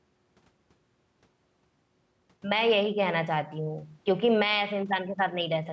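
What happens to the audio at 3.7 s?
Gain pumping at 3.7 s, as throughout: the gain swings about 5 dB, squashing loud and soft parts closer in level, likely a fast limiter clamping excessive gain.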